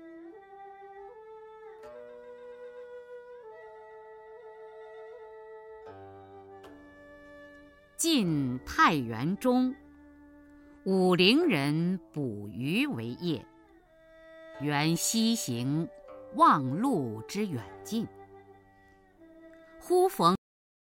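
A cut-off end hits at 20.35 s: the audio stops abruptly in the middle of a sound and falls straight to digital silence, with no decay or natural tail, and that silence runs for the remaining 0.64 s of the clip. The sound was truncated rather than faded because the final stretch of buffered audio was never written out or played back, so the recording simply ends where the data ran out.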